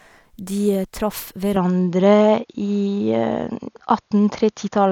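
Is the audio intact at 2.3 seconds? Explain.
No. From 1.56 s to the end of the clip, the sound shows an input switched to a poorer device, which is the likely cause. The speech abruptly loses everything above 6.8 kHz, so it turns duller and boxier, with no gap at the changeover. The level shifts by about 5 dB, and a faint new background noise appears, roughly 55 dB below the speech. At 2.3 seconds you are hearing this narrower, differently coloured pickup.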